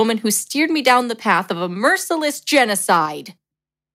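Right after "who steered me", from 0.87 to 0.98 s, the loudest syllable turns harsh and crackly. This is microphone overload. The input was likely set so hot that peaks ran about 5 dB past the converter's ceiling, and their tops were sliced flat. At 1.02 s the level drops abruptly by about 3 dB, voice and room together. That is a microphone volume step-down, likely the call software reacting to the distorted peak. From 1.29 to 1.33 s, just before "of a", a milder overload adds a slight edge, about 1 dB over. Just after "of a", at 2.04 s, the level steps down again, by about 2 dB, likely another automatic correction. Overload returns from 2.54 to 2.59 s, about 4 dB over, with crackle. From 2.91 to 2.98 s it is likely clipping again, about 2 dB over, and a small share of samples are squared off. Finally, at 3.06 s, the biggest step-down arrives, about 4 dB, likely the software cutting input gain once more.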